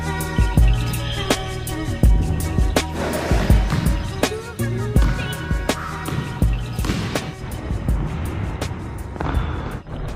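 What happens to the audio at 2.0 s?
Nothing goes wrong at 2.0 s; the audio continues intact through that moment with no audible fault.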